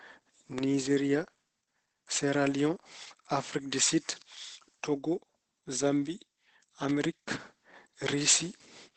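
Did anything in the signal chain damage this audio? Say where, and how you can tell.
Yes, at two stages. Throughout the clip the speech sounds muffled and hoarse, with heavy codec damage. Nothing is present above about 8.6 kHz, so the band stops at wideband. That sound is typical of Opus compression in its SILK speech mode. The likely cause is an Opus encode at a very low rate, which fits roughly 12 kbps. At that rate the encoder narrows the bandwidth and models the speech rather than coding it in detail.

There are two sharp snaps laid on top of the sound, at 0.58 s and 6.89 s. Each is a very short burst, not a gap or a dropout. Such a snap is added to the signal rather than cutting it, and that points to the analogue wiring stage. It fits an electrical switching spike. The likely cause is a nearby switch, motor or static discharge arcing, with the audio line picking up the transient.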